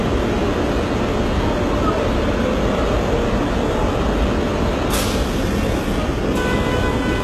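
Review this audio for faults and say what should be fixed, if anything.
HE-AAC compression damage runs through the whole clip. The treble sounds synthetic and gritty, and nothing is present above 12.3 kHz. The upper band was likely rebuilt from copied lower bands, which fits a very low bitrate near 16 kbps. To prevent it, encode at a higher bitrate or with a full-band codec.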